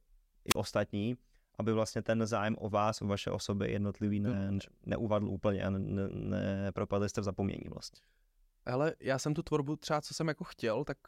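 Right near the start, from about 0.48 to 0.56 s, there's a wireless microphone squelch dropout. The analogue FM link from the mic faded for a moment, so the receiver's squelch clamped down and muted its output. You hear a quick swell of hiss or static, then a hole of near silence lasting roughly 34 ms, and then the speech comes back. It's short.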